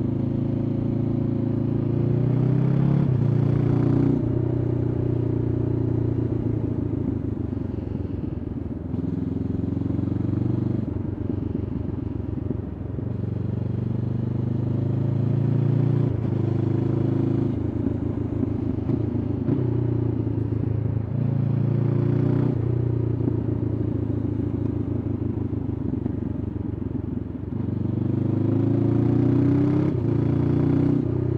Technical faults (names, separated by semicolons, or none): none